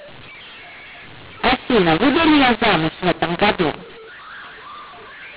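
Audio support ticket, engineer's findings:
mu-law and A-law mixed up, whole clip. G.711 decoder reading mu-law bytes with the A-law table. Level mapping scrambled: some samples too loud, others too quiet, quietest lifted well off zero. Result: harsh, distorted speech; pauses filled with noise. G.711 coding itself intact: 8 kHz mu-law, band capped at 4 kHz as expected.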